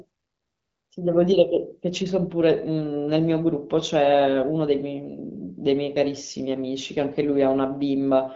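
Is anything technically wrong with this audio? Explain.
No, this is speech over what sounds like an AMR wideband (HD Voice) path at a rate consistent with 12.65 kbit/s, with nothing above 7.5 kHz, exactly as that codec should behave.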